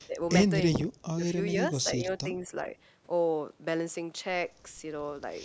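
The speech dips in four short spots: at 0.06 to 0.15 s it drops by roughly 20 dB, at 1.04 to 1.23 s by around 25 dB, then only slightly, about 5 dB, at 1.83 to 2.08 s and 2.24 to 2.49 s. This is likely speech suppressed in double talk, where the echo canceller, hearing both sides at once, turned down the near talker along with the echo. The call's microphone processing limits the band to 8 kHz.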